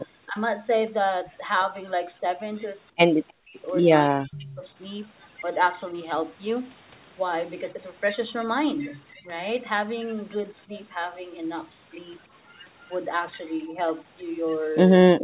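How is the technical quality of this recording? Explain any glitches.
The speech comes through a narrowband call path, with nothing above 4 kHz, consistent with G.711 A-law at 64 kbps. Several dropouts and an echo stand out.

Speech suppressed in double talk occurs at 0.28 to 0.37 s, 2.21 to 4.63 s, 9.22 to 10.72 s and 13.69 s to the end. The level dips by about 10 dB in the first, about 20 dB in the third, and by as much as about 40 dB in the second and last. The speech sounds ducked or cut away in pieces. The likely cause is an echo canceller muting both talkers during overlapping speech.

An echo leak runs from 3.28 to 4.62 s. A faint copy of the speech, about 25 dB down, trails 318 ms behind. It likely comes from a loudspeaker's echo escaping cancellation.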